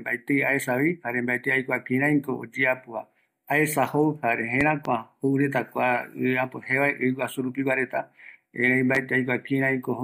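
Speech with a loud pop: a double pop between 4.61 and 4.89 s and a single one at 8.95 to 8.98 s, each rising well above the speech as a tall waveform spike and a thin broadband vertical stripe on a spectrogram, likely from a voltage pulse such as a switch or static discharge.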